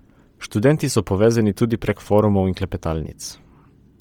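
The speech has a breathy, grainy edge throughout, likely from heavy Bluetooth LC3 compression, which fits a 32 kbps stream with noise-filled upper bands.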